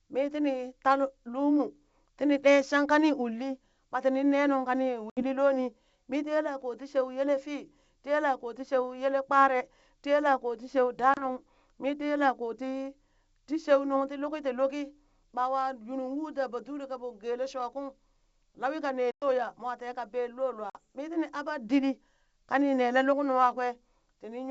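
Packet loss on an ADPCM call hits at 5.10–5.23 s (70 ms lost), 11.14–11.28 s (30 ms), 19.11–19.25 s (110 ms) and 20.70–20.76 s (50 ms). Each leaves a hard-edged silent hole. The decoder's predictor and step size drift from the sender's, so speech resumes with brief distortion.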